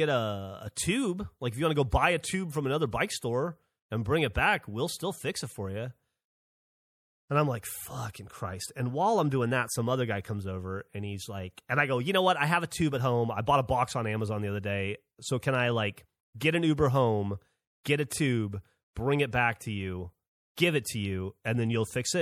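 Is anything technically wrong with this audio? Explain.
Yes. Throughout the speech there is plainly audible damage that is likely from MP3 compression at a low bitrate, consistent with around 64 kbps. Starved of bits, the encoder discards weaker frequency lines that flicker in and out between frames, so the sound turns watery and swirly, s sounds chirp metallically, and consonant onsets smear. A spectrogram shows speckled, patchy holes.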